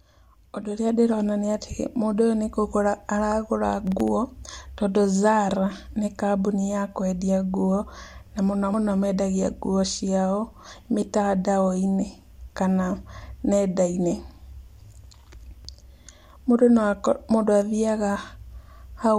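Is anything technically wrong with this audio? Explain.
Yes. From 3.87 to 4.08 s, processor overload crackle: the speech tears into gritty clicks as several very short buffers, around a millisecond or two each, miss their deadline and drop to silence. Unlike a single dropout, it's a brief cluster of tiny gaps.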